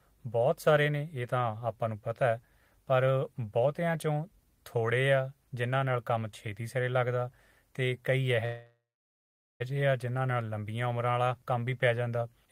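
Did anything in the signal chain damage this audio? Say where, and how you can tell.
Yes. From 8.45 s to 9.62 s there is a call audio freeze. The last sound is held as a buzz that fades, and about 800 ms of that gap is silent. When the audio resumes it continues where it stopped with nothing missing, so the rest of the clip runs about 1.15 s late. The stage is the network: packets were likely delayed in transit, the jitter buffer ran dry, and the receiver filled the wait.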